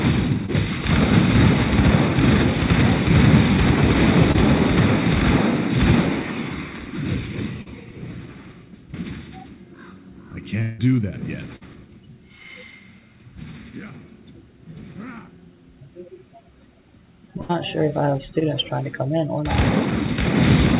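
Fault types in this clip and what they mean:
Short concealed packet loss: at 0.46, 4.32, 7.62 and 18.39 s, 20 to 40 ms of audio failed to reach the decoder in time. The receiver bridged each gap by extending the preceding sound before blending back, leaving a brief smear or wobble.
Long network dropout: from 10.62 to 10.80 s about 160 ms of audio is missing. The receiver stretches the last sound across the whole gap as a fading buzz or hiss, with no silence, and then resumes further on. The likely cause is a network interruption.
Burst of packet loss: at 11.56 to 11.63 s and 17.41 to 17.51 s, consecutive packets were lost or arrived too late, removing about 40 and 80 ms. Each gap is filled with the previous sound turned down over time, heard as a held buzz or fading hiss.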